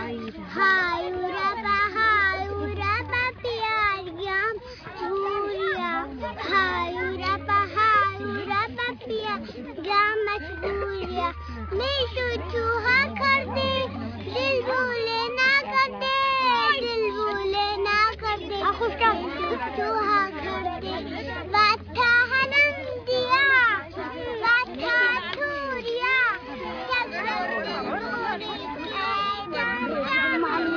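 Nothing goes wrong anywhere in the recording; it just runs along steadily without a single glitch to point at.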